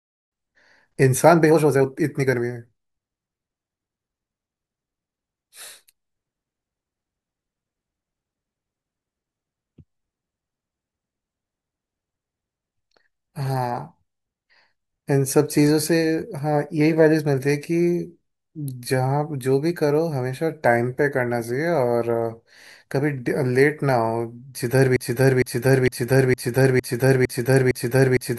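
From 24.96 s to the end, a 0.46 s fragment repeats exactly seven times: a broken-record loop, likely a stalled player resending its last buffered piece.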